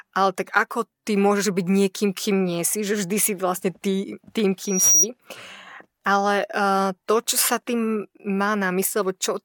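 From 4.62 to 5.07 s, loudspeaker feedback squeal: a single 5.8 kHz tone swells over roughly a third of a second to about 5 dB above the speech, unlike steady interference hum.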